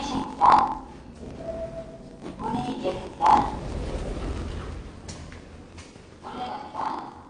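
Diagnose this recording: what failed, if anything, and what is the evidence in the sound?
Block size mismatch (truncated) at the driver or buffer stage: a 45.9 Hz buzz throughout and sound running 1.07 times fast at near-normal pitch. This fits 1,024-sample blocks losing their tails. It would show as regular waveform breaks and vertical spectrogram stripes.

The sound is dull and smeared with plainly audible damage throughout, a warbling or fizzy texture, and nothing above 9.8 kHz. The likely cause is AAC compression at the codec stage, consistent with roughly 32 kbps. A spectrogram would show a flat ceiling and patchy high bands.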